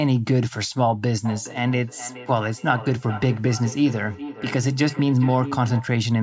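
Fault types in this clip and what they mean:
feedback echo between two devices: speech re-enters the microphone from a second device, repeating roughly every 0.4 s; the spectrogram shows fainter, thinner copies trailing each syllable at that spacing.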